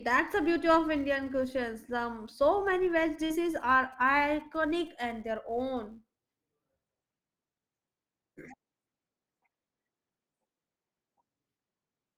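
Across the whole speech clip, a filter is restarted on every block. It loses its stored state at each block boundary and starts again from silence. Each restart leaves a small transient. These repeat at about 172 Hz, which fits a block of 256 samples. The result is a steady buzz under the speech. It rises and falls with the speech level, growing louder on strong syllables and fading in the pauses.

From 2.67 s to 5.12 s, GSM signalling bursts break in. A nearby 2G phone is signalling, so its radio sends brief groups of bursts rather than a steady carrier. The audio circuitry rectifies them into sound. They form a galloping dit-dit-dit of short buzzes at 217 Hz. They sit well below the speech, about 30 dB down.

Inside that stretch, from 3.25 s to 3.31 s, there is a short concealed packet loss. About 50 ms of audio failed to reach the decoder in time. The receiver filled roughly 44 ms of the gap by extending the sound just before it, then blended back into the real signal. 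It is heard as a brief smear or wobble in the speech, overlapping the GSM buzz.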